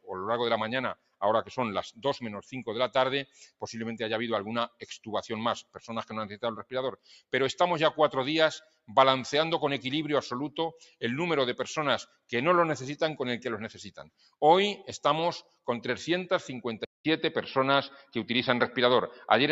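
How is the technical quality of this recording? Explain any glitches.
The quality is compromised: a speech-style noise suppressor works on the audio the whole way through, and near the end the input appears to change to a weaker device.

Throughout, the noise suppressor is applied to material it wasn't designed for. It treats sustained tones and decaying tails as noise and pulls them down, while attacks pass. The level keeps swinging by roughly 5 dB, so the sound pumps and thins.

On top of that, the noise suppressor cuts sound hard in spots: 0.0–3.62 s, 4.68–7.33 s, 8.6–8.9 s, 10.8–11.02 s, 12.05–12.32 s, 13.91–14.34 s and 15.42–15.68 s. Held portions and tails sink by up to about 18 dB, so the sound ducks and its decay gets clipped short.

At 16.85 s there's a 200 ms gap, and then the tone changes until the end. The new input passes a narrower band, so it sounds duller. The level shifts by around 5 dB, and a noise floor sits roughly 40 dB down. 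The likely cause is an input switched to a poorer device.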